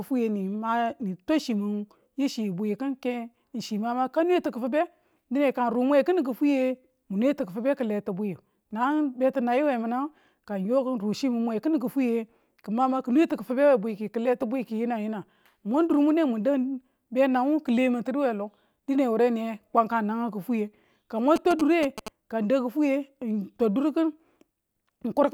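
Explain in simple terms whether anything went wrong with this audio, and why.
Right after "ka mwan", from 21.36 to 22.08 s, there's a galloping ticking buzz: GSM signalling bursts, a nearby 2G phone's radio pulses being picked up by the audio circuitry.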